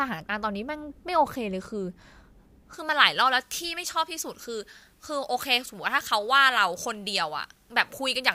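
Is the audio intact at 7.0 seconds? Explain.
No. At 7.0 s the speech sounds thin and bright, with sibilants that sting. This is pre-emphasis left on, running from 2.73 s to the end of the clip. The treble was deliberately lifted for transmission or storage, but the matching de-emphasis cut was never applied on playback. The top end stays about 11 dB hotter at 10 kHz than at 1 kHz, a tilt that fits a J.17-style emphasis curve.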